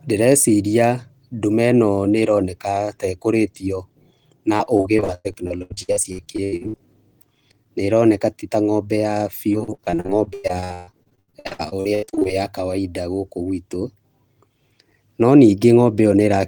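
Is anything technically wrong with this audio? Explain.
Yes. There is repeated packet loss (robotic sound) at two points in this speech. From 4.57 to 6.87 s, and again from 9.53 to 12.29 s (between "ti ta ng'ombe ya" and "ya kawaida gũkũ gwitũ"), packets kept going missing. Each gap, up to about 103 ms and 136 ms respectively, was patched by extending the preceding sound. Concealment covers roughly 40% and 45% of these stretches, so the speech turns choppy, with pieces dropped out.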